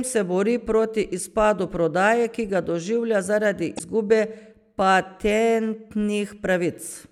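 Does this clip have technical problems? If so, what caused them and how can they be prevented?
Yes. From 3.75 to 3.81 s the speech breaks up, caused by damaged data in the compressed stream. Corrupted bytes made the decoder misread those frames and lose sync until it found the next valid frame header. To prevent it, transfer and store the file with checksums or error-correcting transport, and keep metadata such as stream titles out of the audio payload.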